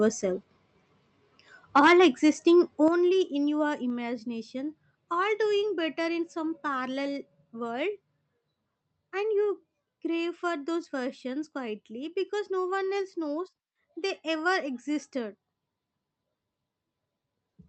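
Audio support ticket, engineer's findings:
Microphone overload, 1.76–2.05 s: input gain likely set too high, so peaks exceed converter full scale by about 7 dB. Flattened waveform tops on a few percent of samples give a harsh, crackly edge to the loudest speech.

Microphone volume stepped down at 1.87 s (about −3 dB), 2.88 s (about −6 dB) and 3.9 s (about −2 dB): likely the call software's gain control reacting to the overload by cutting device input in discrete steps. Speech and background drop abruptly together each time.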